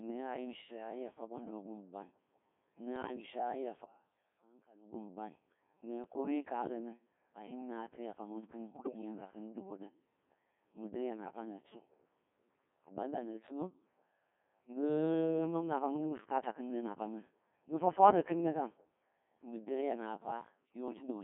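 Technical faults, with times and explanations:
Throughout: Codec 2 vocoder. The voice was reduced to pitch, voicing, energy and a spectral envelope, which fits roughly 1.6 kbit/s, and rebuilt from sine waves inside a 200 Hz to 3.5 kHz band. The original waveform is gone, so the speech comes out heavily robotic and buzzy.
2.96 to 3.26 s and 8.72 to 9.01 s: bit errors on digital voice radio. Corrupted bits hit a few frames in the first burst and more in the second, at about 3 and 5 percent error rates. Each bad frame decodes with a wrong pitch, level or spectrum, so the synthetic voice lurches and warbles into garbled bleeps.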